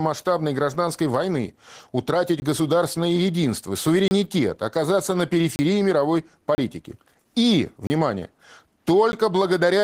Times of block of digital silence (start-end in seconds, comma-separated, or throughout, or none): 2.40-2.42, 4.08-4.11, 5.56-5.59, 6.55-6.58, 7.87-7.90, 9.12